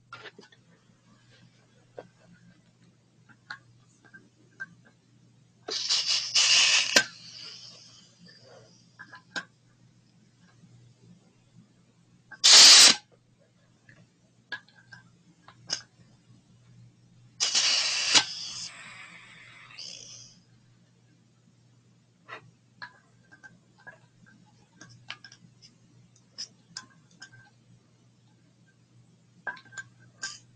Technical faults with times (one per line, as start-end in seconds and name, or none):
0.00-30.55 noise suppressor applied to music or sounds
0.00-5.66 sound cut by the noise suppressor
8.78-12.30 sound cut by the noise suppressor
13.05-14.51 sound cut by the noise suppressor
15.14-15.34 sound cut by the noise suppressor
15.89-17.39 sound cut by the noise suppressor
20.42-24.76 sound cut by the noise suppressor
25.52-30.55 sound cut by the noise suppressor